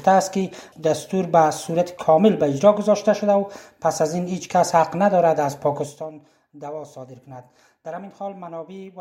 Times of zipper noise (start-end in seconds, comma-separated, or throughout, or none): 5.76-6.12